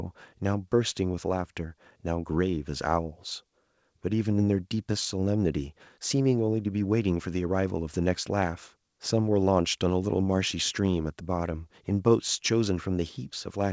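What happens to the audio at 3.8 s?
Nothing goes wrong at 3.8 s: the speech runs on intact through that moment, carrying only the band-limited character of the call path, with nothing above 8 kHz, as G.722 wideband coding would give.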